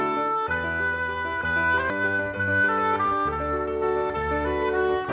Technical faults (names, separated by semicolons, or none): skip ahead; jitter buffer speed-up